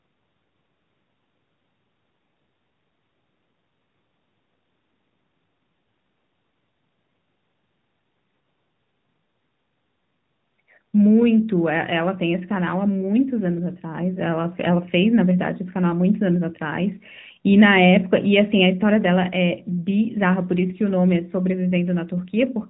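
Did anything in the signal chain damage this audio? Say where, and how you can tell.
Yes. The AMR narrowband mobile codec damages the speech throughout, at the codec stage. Nothing passes above 4 kHz, and a plainly buzzy, synthetic edge points to a mode around 10.2 kbps, where sparse pulses drive a vocal-tract model.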